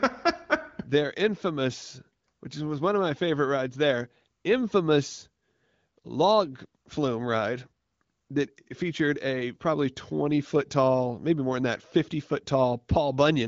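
No technical faults can be heard in this speech at any point.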